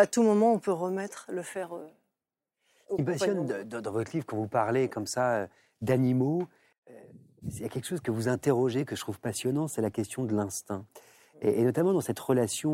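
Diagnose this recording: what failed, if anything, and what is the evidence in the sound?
Nothing here failed; the speech comes through without any fault to point to at any stage of the chain.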